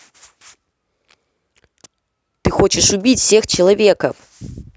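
A short recording of speech, with nothing technically wrong to report. No fault of any kind can be heard at any point in it.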